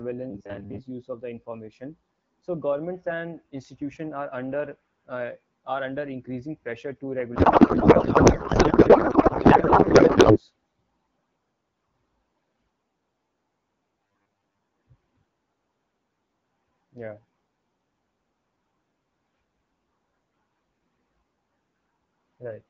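From 0.31 to 0.80 s, just before "of the information", the speech turns into a rigid, metallic buzz at 100 Hz that only loosely tracks the words. This is robotic sound from repeated short buffers. The likely cause is audio arriving too seldom, so the receiver loops the last fragment. A 100 Hz buzz fits a 10 ms repeat, and most of the real audio in that stretch is skipped.

From 7.35 to 10.40 s, right after "under increasing pressure to", the speech gives way to garbled noise and warble that barely follows it. This is a codec payload misread: AMR frames packed octet-aligned are being decoded as bandwidth-efficient, so every field is read from the wrong bit position until the formats match again. Outside the damaged spans, the wideband AMR-WB coding sounds consistent with a rate of about 12.65 kbit/s or higher, with only light codec colouring.

From 14.07 to 14.59 s the same 100 Hz metallic buzz returns, again robotic sound from repeated short buffers, and is likely caused by late-arriving audio. 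About half of that stretch is replaced by repeats of roughly 10 ms fragments.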